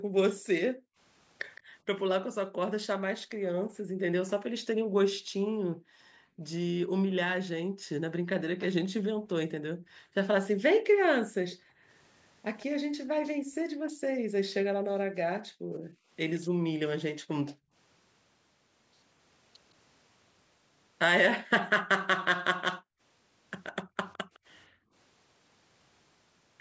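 A speech clip, band-limited to nothing above 8 kHz by normal call microphone processing, with two technical faults. The first is background gated by the echo canceller. From 0.0 to 17.73 s, the room sound keeps dipping away, for about five seconds in total, by as much as about 40 dB. It drops again between 22.79 and 24.94 s, for under a second, by up to about 37 dB. Each time, the canceller clamped the microphone while the far side was playing. The second fault is an echo leak. A faint, delayed copy of the speech appears briefly at 1.55 to 1.61 s, about 161 ms late and about 25 dB down. A longer stretch runs from 11.03 to 16.4 s, about 149 ms late and about 20 dB down. A last scrap comes at 24.13 to 24.39 s, about 161 ms late and about 30 dB down. The likely cause is a loudspeaker on one side whose echo canceller let part of the returning sound through.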